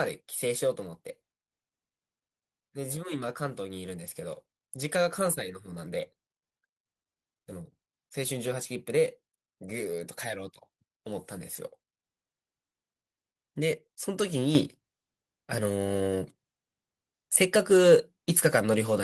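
At 14.55 s the microphone volume stepped up: the call software judged the input too quiet and raised the device gain by about 7 dB at once. Voice and background noise jump together and stay louder, unlike a speaker leaning closer, which lifts only the voice.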